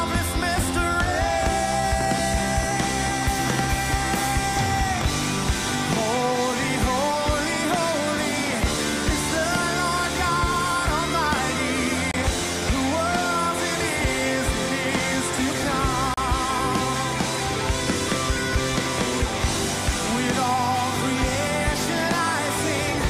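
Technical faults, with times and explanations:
12.11–12.14 s and 16.14–16.18 s, gap between stream segments: the timestamps of adjacent stream segments leave a small space between them, and the player fills each space with silence. The sound drops out with hard edges for about 26 ms and then about 35 ms, then resumes with nothing missing, only delayed. The two holes fall about 4 s apart, which fits 4-second segment boundaries.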